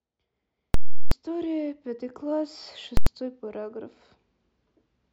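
Speech clip with invalid numbers at full scale: 0.74–1.12 s (loud pops bracketing silence, fits a 16384-sample block) and 2.97 s (one bang); waveform shows flat plateaus far beyond the speech peaks.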